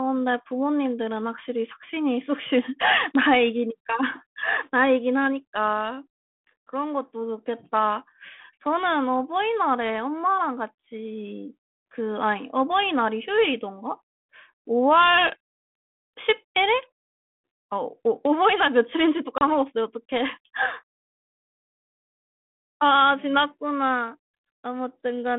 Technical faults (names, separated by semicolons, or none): packet loss on an ADPCM call